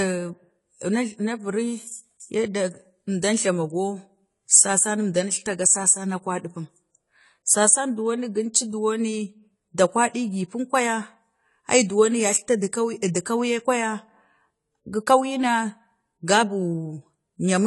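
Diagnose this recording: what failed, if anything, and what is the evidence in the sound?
The codec stage looks like the weak link: AAC compression damage runs through the whole clip. Nothing sits above about 11.5 kHz, and the speech sounds dull with a warbly, fizzy edge on sibilants. That's likely AAC-LC at a low bitrate, around 32 kbps, starving the upper bands.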